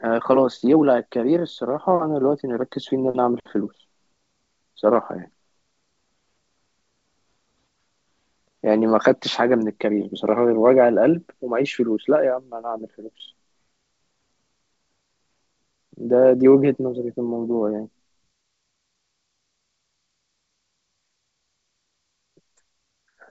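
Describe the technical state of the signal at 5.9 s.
At 5.9 s the speech is intact, with no fault at that moment; it runs through a G.722 wideband telephone path at 64 kbit/s, which keeps the band up to about 7.7 kHz.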